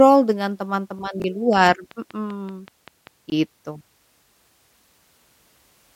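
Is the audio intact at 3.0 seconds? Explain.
No, at 3.0 seconds you're still inside a train of clicks that runs from about 1.53 to 3.08 s. It's a steady ticking, roughly ten sharp pops at a regular 5.2 per second, each one about as loud as the speech itself. The even spacing and similar shape point to something repeatedly injecting a pulse into the signal, likely electrical interference from nearby gear or a faulty connection or power supply.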